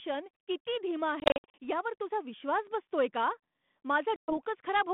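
Speech cut by hard-edged gaps of silence, scattered from 1.2 to 1.54 s (the longest about 60 ms) and again from 4.16 to 4.38 s, each followed by speech that returns slightly distorted. This is packet loss on an ADPCM call: about ten, then around seven packets dropped, desynchronising the decoder's predictor.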